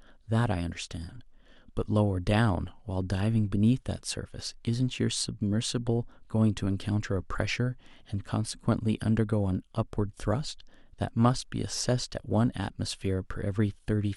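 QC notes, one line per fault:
Nothing to flag here, the speech comes across without any technical problems worth a QC line.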